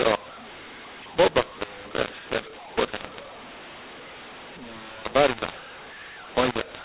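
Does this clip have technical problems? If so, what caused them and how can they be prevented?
Yes. Throughout the speech the sound is harsh and gritty, with levels jumping unnaturally: some parts are too loud, others oddly thin, and the pauses fill with a steady hiss instead of falling silent. This is mu-law and A-law mixed up. The audio was written as A-law G.711 telephone coding but read back as mu-law. Because the two laws map their 8-bit codes to different points on the logarithmic scale, every sample lands at the wrong amplitude, and near-silent codes decode as audible noise. The telephone band itself comes through as expected, with nothing above 4 kHz. To prevent this, carry the G.711 law explicitly in the stream or file header and have the decoder check it rather than assume a default.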